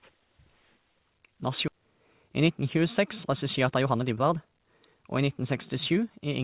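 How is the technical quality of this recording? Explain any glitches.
The speech has one abrupt jump and two stretches that rush along, all heard through narrowband call audio with nothing above 4 kHz, which fits G.711 A-law coding.

Skip ahead at 1.68 s: roughly a second of audio was dropped, so playback leaps forward and the two sides join with no gap.

Jitter buffer speed-up from 2.23 to 2.63 s (109%) and 3.31 to 6.2 s (116%): an overfull buffer trimmed pitch periods repeatedly, so speech sounds hurried at unchanged pitch.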